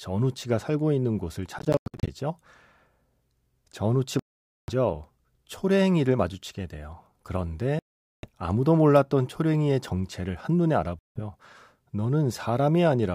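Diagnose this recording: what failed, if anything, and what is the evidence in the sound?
Bluetooth dropout, at 1.59–2.09 s, 4.19–4.71 s, 7.79–8.28 s and 10.99–11.20 s: the speech cuts to silence with hard edges, then resumes further along, as though it had kept playing. The first event is broken into several short holes, the longest 91 ms, while the later ones each lose up to about half a second of audio. The likely stage is the wireless playback link, where late packets were discarded rather than played.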